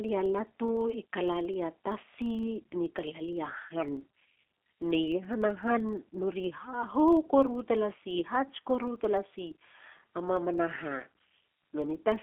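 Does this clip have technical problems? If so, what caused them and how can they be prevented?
Yes, there are two faults, both present for the whole clip.

The speech has been through the G.729 codec, most likely the G.729A variant, at a rate that sounds like 8 kbit/s. The sound sits in a telephone band of roughly 250 Hz to 3.4 kHz, with nothing above 4 kHz. The codec rebuilds speech from a vocal-tract filter, a pitch predictor and a few pulses per frame, which gives the plainly audible rough, synthetic edge. Simple band-limiting alone would sound dull but clean. Here the grain inside the band is what points to this codec. To prevent it, record or transfer with a wideband codec, or keep a local uncompressed copy instead of capturing the call path.

There is also a filter restarted on every block. It leaves a regular low buzz at about 23.4 Hz, which fits 2048-sample blocks. Each block starts from a blank filter state, so each block opens with a small transient. 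Those transients repeat at the block rate and rise and fall with the speech level. Mains hum would stay at 50 or 60 Hz and keep going through pauses. This buzz is slower and fades when the speech does. To prevent it, carry the filter state from one block into the next rather than resetting it.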